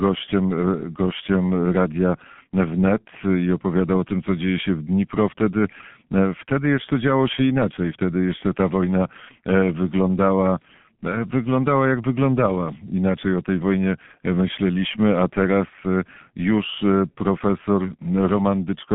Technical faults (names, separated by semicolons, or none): G.723.1 codec